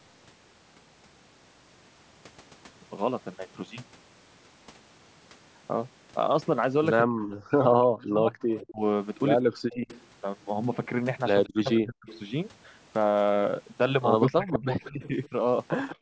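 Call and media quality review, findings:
Speech suppressed in double talk: speech dips and cuts out in pieces at 7.06–9.89 s, 11.47–12.08 s, 14.31–15.33 s, roughly 40 dB deep, shallower at the end. Likely an echo canceller ducking both talkers.

Echo leak: faint delayed copy of the speech, about 182–189 ms behind, at 8.49–8.71 s, 9.70–10.02 s, 11.44–12.19 s, 14.48–15.96 s. Likely incomplete cancellation at the loudspeaker end.

Background gated by the echo canceller: room sound drops out by about 40 dB for about 70 ms at 15.96 s, as the canceller clamps the microphone while the loudspeaker plays.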